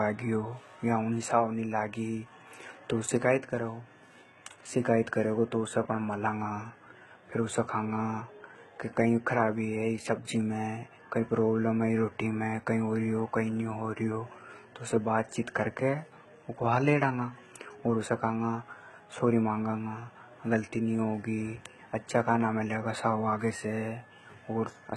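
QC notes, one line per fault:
Throughout, HE-AAC compression. The treble sounds synthetic, with nothing above 11.8 kHz. Sibilants come out gritty and lispy, with a metallic edge. Damage is heavy. The likely cause is a low-bitrate HE-AAC encode, which fits a stream of around 16 kbps. Only the lower spectrum is truly coded. The upper bands are rebuilt by copying lower content upward under a coarse envelope. Their harmonics no longer line up with the speech below.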